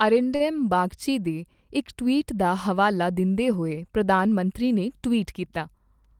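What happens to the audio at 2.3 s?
At 2.3 s the speech carries on intact, with no dropout, click, distortion or other fault at that moment.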